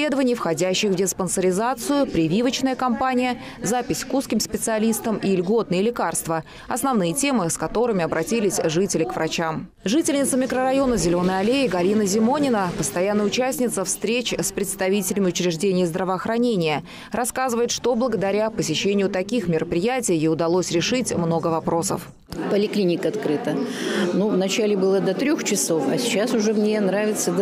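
No technical faults can be heard anywhere in the clip. Nothing breaks up, drops out or distorts over the whole recording.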